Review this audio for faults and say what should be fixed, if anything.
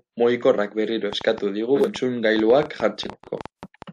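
There's a train of clicks running from 1.13 to 3.83 s: around twenty sharp, similar ticks at roughly 6.3 per second, unevenly spaced and peaking about 10 dB above the speech, audible in the gaps too. Likely cause is interference from nearby gear or a flaky interface. Shield cables and check grounding so stray pulses can't reach the signal path.

Frames out of order show up twice. At 1.75 to 1.88 s two 46.4 ms blocks play swapped, which fits single frames exchanged. At 3.10 to 3.41 s two 139.3 ms blocks swap, which fits a few frames each. Both give a garbled flutter, and no time goes missing. Fix the packet sequencing on the receive side so frames get reordered before decoding.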